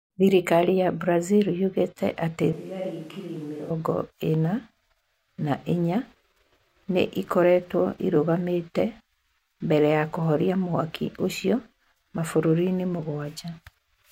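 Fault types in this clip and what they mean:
Switch to a distant microphone: from 2.53 to 3.70 s the speech turns suddenly roomy and thin, roughly 10 dB quieter with more background noise, likely a farther microphone.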